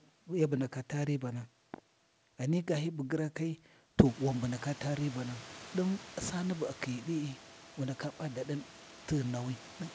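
Nothing goes wrong here: the room's background noise rises by about 19 dB at around 4 s yet still sits about 21 dB below the speech, and the call path leaves nothing above 8 kHz, which fits a G.722 codec.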